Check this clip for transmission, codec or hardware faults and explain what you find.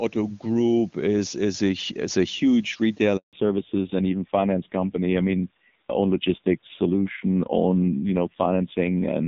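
Two faults are present, and they are linked.

At 3.17 s, right after "a is a huge", there is a handover gap. The call switched networks and no speech frames arrived. The sound drops out within a few tens of milliseconds. Silence lasts about 160 ms, until 3.33 s. Whatever was said then is gone.

From 3.33 s to the end, there is a fallback to narrowband. The new link carries an older narrowband codec instead of HD Voice. Nothing above 4 kHz remains. The speech turns dull and rough, consistent with a low narrowband rate near 5.9 kbit/s. Before the switch, the wideband HD Voice path sounds clean, which fits a rate around 23.85 kbit/s.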